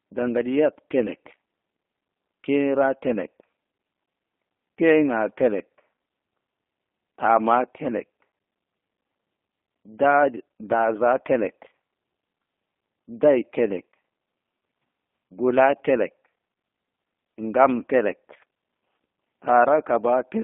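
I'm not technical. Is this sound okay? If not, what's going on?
No. From start to finish, this speech has passed through the G.729 codec, a voice-compression method used on internet phone calls. Rather than sending the sound itself, it sends a compact description of the voice, and the listener's end rebuilds the speech from that. Here the rebuilt voice is clearly rough and slightly artificial, and it sounds thin and muffled because only roughly 250 Hz to 3.6 kHz gets through, like a phone line.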